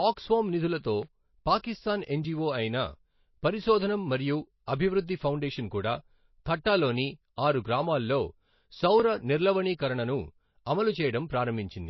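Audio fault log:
Throughout: MP3 compression. The speech is band-limited, with nothing above about 5.8 kHz, and has a plainly audible watery, swirly texture. S sounds turn metallic and attacks smear. This is likely a low-bitrate MP3, around 24 kbps, cutting treble and dropping weak frequency lines frame to frame.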